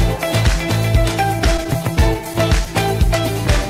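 Repeated stalls (stutter) run from 1.39 to 2.68 s: thirteen short gaps, none longer than 15 ms, where packets arrived too late and the jitter buffer ran dry. The receiver stretched the preceding sound to fill about 130 ms in total, roughly a tenth of that span. Nothing is lost, but the sound drags and stutters.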